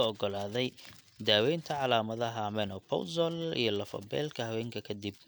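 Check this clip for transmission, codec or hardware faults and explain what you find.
No transmission, codec or hardware faults turn up anywhere in this speech clip.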